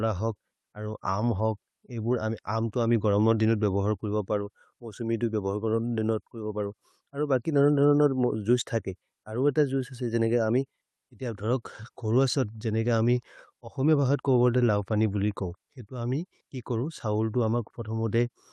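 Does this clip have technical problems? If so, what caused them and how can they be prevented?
No, there are no technical problems to report here.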